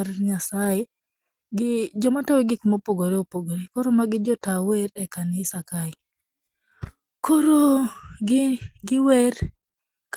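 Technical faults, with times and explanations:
No technical faults can be heard in this speech recording. There is nothing here that calls for a time or an explanation.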